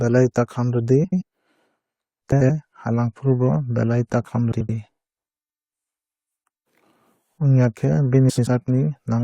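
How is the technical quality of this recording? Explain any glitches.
Four short garbled flutters interrupt the speech, at 1.04–1.22 s, 2.32–2.50 s, 4.52–4.70 s and 8.29–8.47 s. These are frames out of order: two neighbouring 85.3 ms blocks, which fits runs of four frames, were decoded swapped, so no time is lost.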